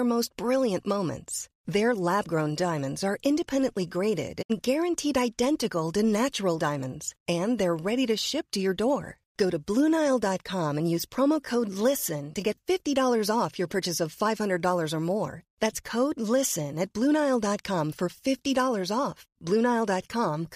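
At 4.41 s, after "diamonds are independently graded", the sound fades out over 20 ms into a short silent hole and returns at 4.52 s with "guaranteed identical to natural". This digital broadcast dropout is the receiver muting on failed frames. The 64 ms lost fits two dropped frames.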